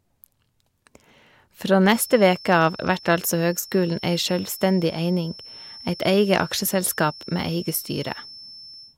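A feedback whistle runs from 1.80 s to the end: a thin, steady tone near 5.3 kHz, roughly 20 dB under the speech, swelling and fading slowly in level. It is likely a loudspeaker-to-microphone loop held just at the feedback threshold, sustaining one frequency without running away.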